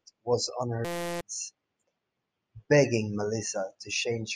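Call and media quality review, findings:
System hang loop, 0.85 to 1.21 s: speech drops out into a steady buzz at 172 Hz. Same 5.8 ms chunk repeated roughly 60 times, which fits a 256-sample ring buffer the audio hardware kept cycling while the driver or host stalled. Around 0.4 s of speech lost. Probable component: audio driver or OS scheduling, not the mic path.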